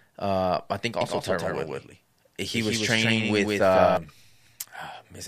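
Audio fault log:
1.01–3.97 s, doubled audio track. A full-band copy of the speech trails by roughly 150 ms, about 5 dB quieter. It has no decay or room colour and cuts in and out abruptly. Likely cause: a slower second capture path, or an edit holding two copies out of step.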